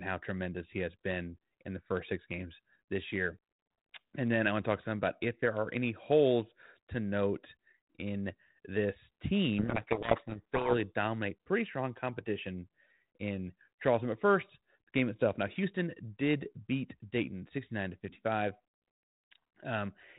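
From 9.59 to 10.75 s a codec payload misread buries the speech in harsh, rasping distortion. The G.726 code words arrive with their bit order swapped, so the decoder rebuilds wrong differences. A spectrogram shows dense noise filling everything below 4 kHz, and the waveform turns ragged.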